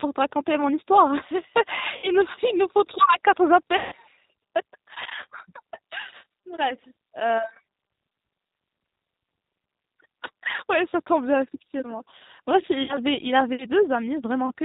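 It's a speech recording squeezed through the G.729 codec at 8 kbit/s. Nothing above 4 kHz survives, and the voice comes out audibly rough and synthetic. There's also VoIP packet loss concealed by the speech codec at 1.97 s, 3.77 s and 12.83 s, with gaps of about 60, 150 and 60 ms smeared into a fading buzzy tone or coloured noise.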